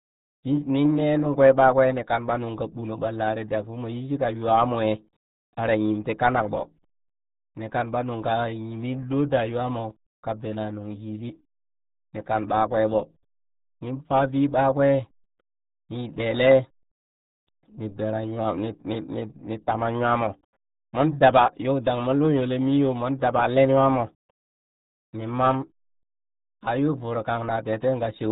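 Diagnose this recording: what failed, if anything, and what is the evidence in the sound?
RealAudio 14.4 codec damage, present throughout the speech from start to finish, points to a failure at the codec stage. Nothing survives above about 3.8 kHz, so sibilants and consonant edges are gone and the speech sounds muffled, with a heavy gargly, bubbling texture. That combination fits a dial-up-era codec running near 8 kbit/s. It discards the upper band and rebuilds the rest from a coarse vocal model, and those approximations leave the gargle.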